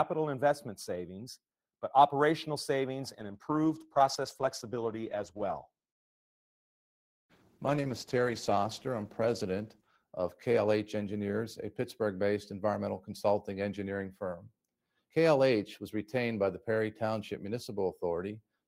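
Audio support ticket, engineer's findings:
Call bitrate drop, 3.08–12.25 s. Bandwidth estimate fell and the encoder was throttled; the coarser coding fits a cut from roughly 32 kbps to 13 kbps, bottoming out for about 5.8 s. Audio bandwidth narrows from 20 kHz to 12 kHz, dulling the top end. Sound turns rougher and watery, with the muffling clearing once the rate climbs back after 12.25 s.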